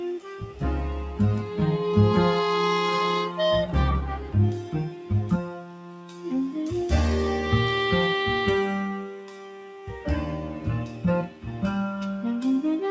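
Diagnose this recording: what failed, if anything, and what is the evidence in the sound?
Noise suppressor applied to music or sounds, throughout, at the call-processing stage. A suppressor tuned for speech is treating steady tones, ambience and decays as noise. Its gain swings by about 10 dB, so the level pumps and thins beneath the G.722 path's 8 kHz ceiling.

Sound cut by the noise suppressor at 0.19–0.62 s, 4.18–4.34 s, 4.58–5.11 s, 5.31–6.28 s, 8.97–10.06 s and 11.28–11.45 s. Sustained or fading material sinks by about 8 to 10 dB as the suppressor clamps down, cutting tails short while sharper onsets pass.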